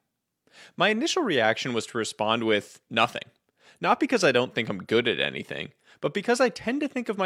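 No technical faults are audible.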